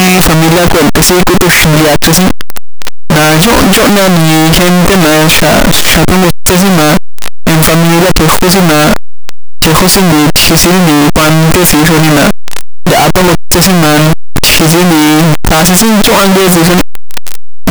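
From start to finish, the speech is buried under a loud, harsh, buzzing distortion, and soft sounds come through about as loud as strong ones. The likely cause is a signed and unsigned mix-up in the 8-bit samples: the top bit is flipped, so every pass through zero becomes a jump across the full range.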